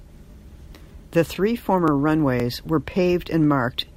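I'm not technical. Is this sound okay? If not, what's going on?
No, there's a stutter caused by overlapping chunks. The speech was handled in half-second pieces, and each piece repeats the last 20 ms of the one before. You'll hear little hiccups at 0.32–0.34, 0.84–0.86, 1.36–1.38, 1.88–1.90, 2.40–2.42, 2.92–2.94 and 3.44–3.46 seconds.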